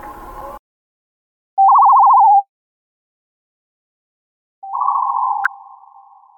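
At 0.38 to 0.42 s and again at 5.42 to 5.47 s, the audio briefly breaks up for roughly 40 to 50 ms. This is damaged data in a compressed stream: corrupted bytes leave the decoder misreading frames and losing sync until it finds the next valid frame header. A plain dropout would leave a silent gap, and a click would be a single sharp tick. Here the break comes from the decoder losing its place in the stream.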